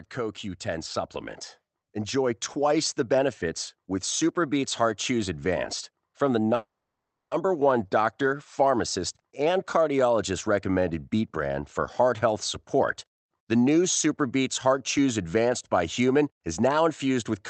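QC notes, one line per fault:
0.15–2.88 s, automatic gain rising: speech and background noise swell together by about 6 dB over nearly three seconds, levelling off before "the benefits with". The gain control judged the input too quiet and raised its gain gradually.
6.55–7.33 s, call audio freeze: after "from the", the last sound is held briefly, then about 0.65 s of silence follows before "one doctor pharmacist and" resumes. Packets were likely delayed, so the jitter buffer ran empty and the receiver inserted a 0.76 s gap with nothing lost.
14.06–15.51 s, jitter buffer speed-up: speech runs about 7% faster at unchanged pitch and sounds hurried. The receiver held more audio than it aimed for and cut short pitch-period pieces, roughly a tenth of a second in total, to reduce the delay.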